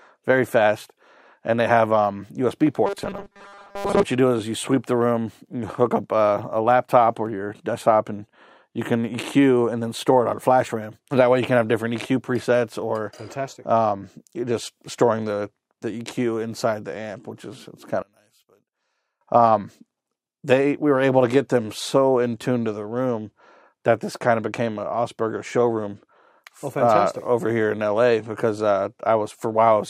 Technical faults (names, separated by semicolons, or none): robotic sound from repeated short buffers; one channel inverted